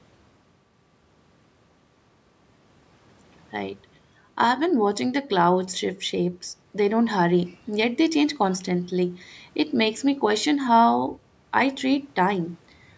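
No faults found in the speech: the call microphone processing works as intended, with its high-pass filter trimming the lowest bass and nothing above 8 kHz.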